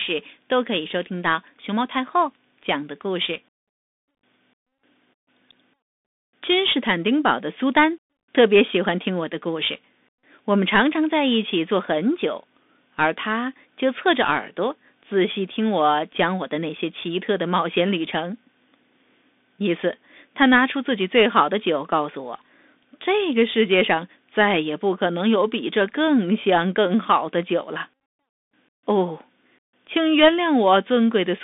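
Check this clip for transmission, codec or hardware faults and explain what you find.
One codec fault runs through the whole recording: the Bluetooth CVSD headset codec. The speech is confined to roughly 250 Hz–3.6 kHz and nothing passes above 3.8 kHz. One-bit slope tracking, consistent with a 64 kbps link, leaves scratchy sibilants, overload distortion on loud peaks and granular hiss.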